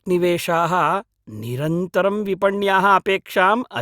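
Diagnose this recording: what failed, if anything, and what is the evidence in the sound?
Nothing in this speech recording points to a failure at any stage of the signal chain. No event in the sound marks a point where the path broke down or misbehaved.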